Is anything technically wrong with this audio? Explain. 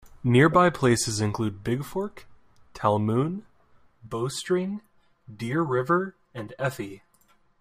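Yes. From 4.07 s to the end at 7.60 s, the speech shows channel delay (comb filtering). One channel arrives roughly 5 ms behind the other, and when the two are folded to mono, the shared signal cancels wherever the delay equals an odd half-cycle. The first notch falls near 100 Hz and repeats every 200 Hz or so above that. The fixed, evenly spaced notches make the speech sound hollow and phasey for that last stretch.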